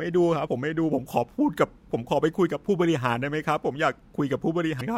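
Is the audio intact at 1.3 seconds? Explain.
Yes, at 1.3 seconds the speech plays through intact, with no dropout, glitch or other fault at that point.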